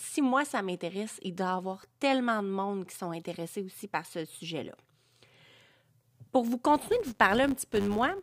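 From 6.68 s to the end of the speech, a buzz appears at 100 Hz. The fault is a filter restarted on every block. The filter loses its memory at each block boundary and begins again from silence. Each restart leaves a small transient. These arrive 100 times per second, which points to blocks of 10 ms. Together they form a steady buzz under the speech. It grows louder and softer with the level of the speech.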